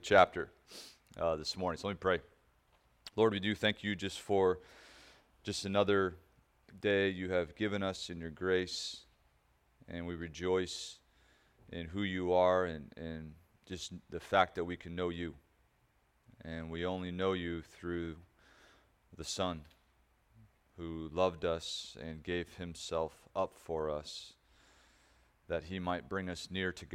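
No technical faults occur anywhere in the audio.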